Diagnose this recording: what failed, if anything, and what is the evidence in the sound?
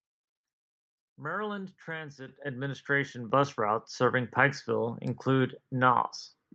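Microphone volume stepped up, at 2.28 s and again at 3.3 s: the speech and the background noise jump in level together, by about 9 dB and then about 6 dB, each in a single instant. The fault sits in call processing. The call software's gain control judged the input too quiet and raised the device's input volume in discrete steps, rather than ramping the level. The call codec's high-frequency cut-off near 8 kHz stays the same across both jumps.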